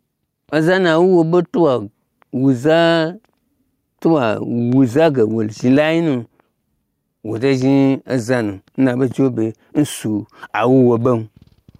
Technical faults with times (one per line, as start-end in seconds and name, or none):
0.00-11.79 gain pumping